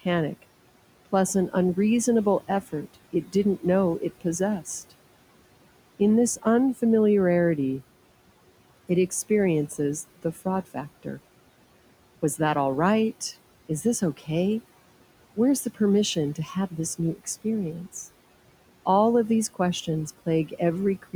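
Noise suppressor artifacts run through the whole clip: the suppressor pulls down what it judges to be steady background by about 18 dB, frame by frame. The room noise, about 20 dB below the speech, sinks in the pauses and rises under the speech.

Speech cut by the noise suppressor occurs at 3.13–3.35 s, between "plus an unreasonable effort" and "know it possessed", and again at 14.01–14.28 s and 16.35–16.73 s, just before "this new". The suppressor mistook low-level speech for noise and attenuated it, by about 12, 13 and 12 dB at the deepest, over roughly a tenth of a second each time, so those syllables sound swallowed and faint.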